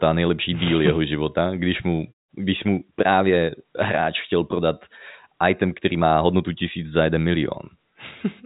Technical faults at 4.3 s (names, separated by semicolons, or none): none